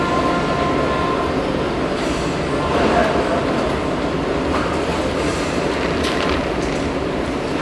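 The clip is a recording of everyday sounds, and there is nothing technically wrong with it. No fault turns up at any point in the recording.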